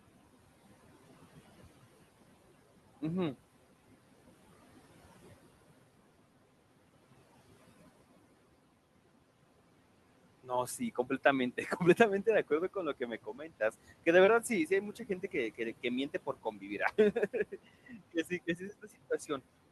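From the start, noise suppressor artifacts shape the whole recording. The room noise, which sits about 17 dB below the speech, is pulled down by about 17 dB in the gaps and returns under each phrase. On a spectrogram the noise floor visibly darkens between phrases and lightens beneath them.

Later, the suppressor cuts into the speech itself at 10.66–11.25 s, 13.0–13.74 s, 14.96–15.34 s, 16.14–16.8 s and 17.86–18.63 s. It misreads quiet speech energy as noise, so brief stretches, from about a tenth of a second to roughly a third, drop by about 11 to 17 dB and sound swallowed. The deepest drop is near 13 s. On the waveform these show as sudden notches in the envelope, and on the spectrogram the weak speech energy fades. The spectrum stops near 12 kHz, which fits the band limit of a call codec such as Opus.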